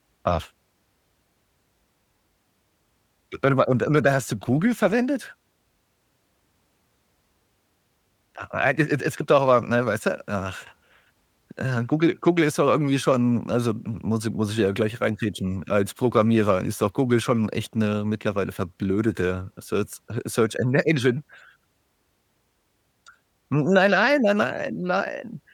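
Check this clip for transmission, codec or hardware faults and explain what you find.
Nothing in this speech recording points to a transmission, codec or hardware problem: the signal stays continuous and stable throughout, with no audible disturbance at any point.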